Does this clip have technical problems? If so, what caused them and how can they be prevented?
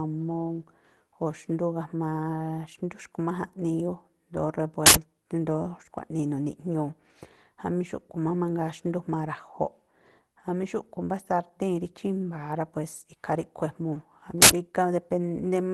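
Yes. Two uninitialised buffer faults occur, at 4.86 to 4.95 s and at 14.42 to 14.51 s. Each is a sudden, loud burst of digital noise lasting about 85 ms, which fits a 4096-sample block. The playback side sent a buffer to the output before any audio had been written into it. The leftover memory was played as if it were sound. To prevent this, zero every buffer when it is allocated, and output silence whenever a block is not ready in time.

At 13.95 s there is a lost packet rebuilt from error correction. One 20 ms packet went missing. The next packet carried a low-bitrate copy of it, and the decoder played that copy, so there is no gap. The result is a brief stretch of rougher, noisier sound. To prevent it, improve the network path or jitter buffering so fewer packets are lost, and keep in-band forward error correction enabled so losses stay covered.

The call path itself sounds like Opus. 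It is band-limited to about 12 kHz and has a coding texture that points to roughly 24 kbps.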